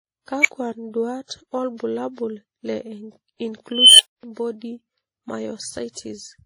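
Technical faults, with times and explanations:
Throughout: transcoding between lossy codecs. Two layers of coding smear are heard together with a dull top end, likely from a low-rate MP3-type encode re-encoded as WMA.
0.41–0.48 s and 3.71–4.23 s: unstable filter. A recursive filter runs away, and a whistle of about 2 kHz, then about 3 kHz, swells over 34 ms and 0.28 s. It clips, then drops out for 35 ms and 0.24 s until the filter resets.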